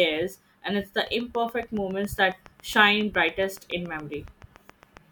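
A train of clicks runs from 1.07 s to 4.98 s in this speech clip, starting just after "and it's the". About thirty near-identical pulses arrive at a regular rate of roughly 7.2 per second, peaking at about the level of the speech itself. They tick through the pauses as well as the talking, which means they sit on top of the audio rather than coming from it. The likely cause is electrical interference from nearby equipment or a faulty connection or power supply.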